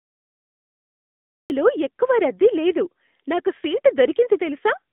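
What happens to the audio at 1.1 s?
Cut-off start, 0 to 1.5 s: at 1.1 s there is only digital silence, because the recording began late. The speech enters abruptly at 1.5 s, partway through a sound, with no natural attack or fade.

AMR narrowband mobile codec, throughout: once the audio begins, the speech is squeezed into a telephone band of roughly 200 Hz to 3.6 kHz. Its coding at 10.2 kbps, which models the vocal tract and drives it with sparse pulses, leaves the speech plainly buzzy and synthetic.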